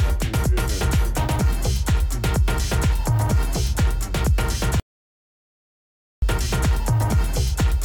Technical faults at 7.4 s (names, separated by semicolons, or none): none